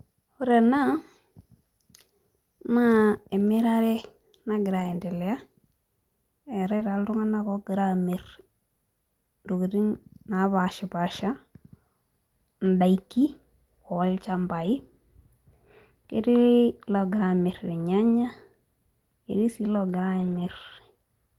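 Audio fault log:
3.47 s, 4.79 to 4.93 s, 6.79 s, 12.65 s, 14.61 to 14.67 s, 20.19 to 20.49 s, lost packet rebuilt from error correction: the speech turns briefly rougher and noisier with no gap. Lost packets were replaced by low-bitrate copies carried in the following packets, so coarser frames play.
6.77 to 6.81 s, short concealed packet loss: a brief smear or wobble in the speech, running straight into a rebuilt stretch at 6.79 s. About 20 ms never arrived in time, so the decoder extended the preceding sound and blended it back into the real audio.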